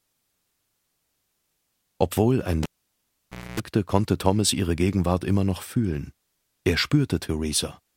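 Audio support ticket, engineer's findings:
Cable pulled and plugged in, 2.63–3.60 s. Pop at disconnect, then about 0.92 s near silence. On reinsertion, 0.26 s of 60 Hz mains buzz while the tip connects ahead of the ground sleeve, then a second pop as audio returns. Suspect the connector or lead at the input.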